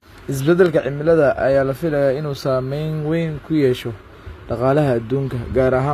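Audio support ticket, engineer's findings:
HE-AAC compression, throughout: s sounds gritty and lispy, treble synthetic, nothing above 14.9 kHz. Likely low-bitrate encode, around 24 kbps; replicated upper bands misalign harmonics.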